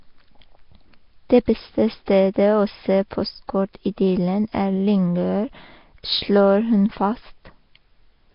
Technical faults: Nellymoser compression

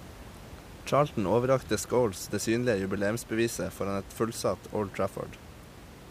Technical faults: none

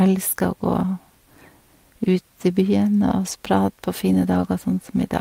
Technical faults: lost packet rebuilt from error correction

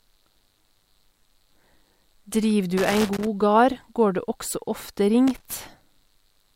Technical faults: loose connector crackle

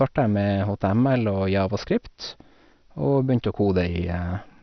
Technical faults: MP2 compression

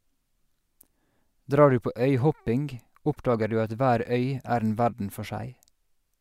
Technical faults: none

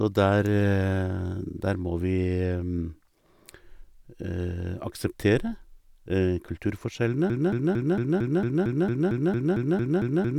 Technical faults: broken-record loop

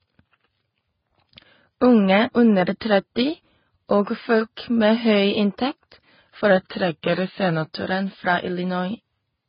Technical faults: transcoding between lossy codecs; drift correction step

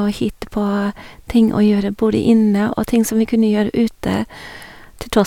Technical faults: none

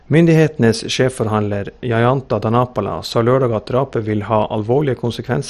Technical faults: MP2 compression

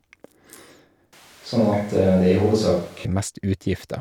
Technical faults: switch to a distant microphone

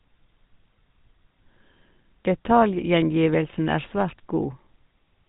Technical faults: GSM full-rate codec

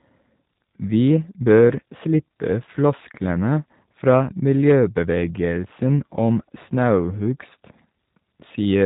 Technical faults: G.729 codec

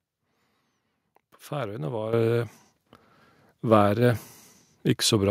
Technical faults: microphone volume stepped up

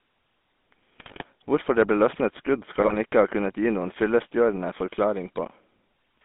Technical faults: GSM full-rate codec; GSM bit errors

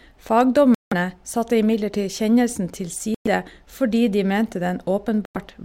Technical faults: Bluetooth stall

